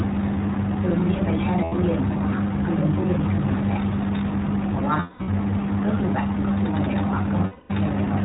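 Throughout, the speech carries the iLBC codec sound: band-limited to below 4 kHz, clear but plainly rough and synthetic, consistent with the 15.2 kbps mode and its 20 ms frames, each coded independently. Lost iLBC frames occur at 1.64 to 1.74 s (80 ms), 5.00 to 5.29 s (260 ms in scattered losses, the longest run about a fifth of a second) and 7.46 to 7.70 s (240 ms). The decoder repeats the last pitch cycle with noise, giving a held, buzzy vowel that fades on the longer gaps. The voice recovers almost immediately afterward.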